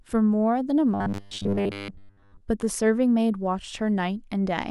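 From 0.94 to 2.42 s, new audio likely arrived too seldom, so playback looped a short buffer while most of the real audio was skipped. This robotic sound from repeated short buffers is a rigid 100 Hz metallic buzz that fits a 10 ms buffer and loosely tracks the speech.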